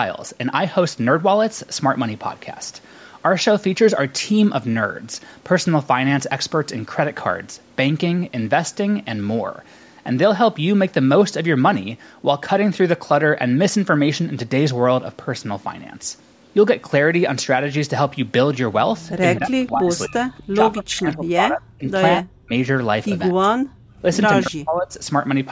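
From 18.98 to 19.7 s, a faint copy of the speech trails about 246 ms behind, roughly 20 dB down. This is an echo leak, likely from a loudspeaker echo canceller that let part of the far side back through. The same delayed copy returns, fainter at about 30 dB down, from 20.38 to 20.43 s.

Overlapping it, from 19.38 to 20.19 s, the talker dips by about 25 dB for roughly half a second. This is speech suppressed in double talk, likely because the canceller mistook both talkers for echo. It happens again from 20.52 to 22.53 s, deeper at about 40 dB, over roughly 1.5 s in pieces. It returns briefly from 23.33 to 23.56 s and from 24.41 to 24.98 s, both around 40 dB down.

From 23.86 to 24.01 s, the room sound drops by about 28 dB and then comes back. This is background gated by the echo canceller, which clamped the microphone while the loudspeaker played.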